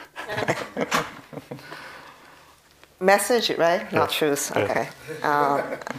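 Two short jumbled moments stand out, at about 0.33 to 0.42 s and again at 4.69 to 4.78 s. Both are chunks out of order: a block of about 46 ms turns up one slot late, so two neighbouring blocks trade places. Nothing goes missing, but there are three hard joins and the sound briefly scrambles.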